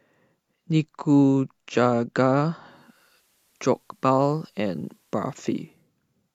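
From 2.63 to 5.91 s, digital radio blending to analogue: a 0.36 s cross-fade to FM adds faint hiss and returns, rather than dropping out.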